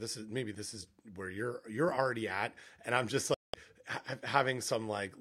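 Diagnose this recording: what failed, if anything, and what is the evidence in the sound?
A digital broadcast dropout at the reception stage silences the speech from 3.34 to 3.54 s, right after "at and i'm just", consistent with six lost 32 ms frames muted outright rather than concealed with repeated audio.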